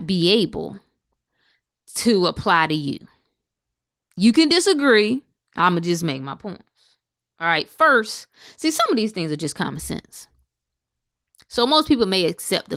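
Listening through this speech recording, nothing stood out as a technical problem.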